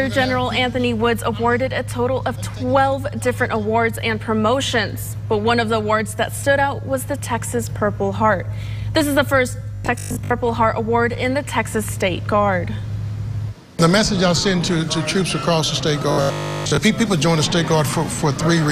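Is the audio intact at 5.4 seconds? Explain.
Yes, the audio at 5.4 seconds is intact, with no dropout, click, distortion or other fault at that moment.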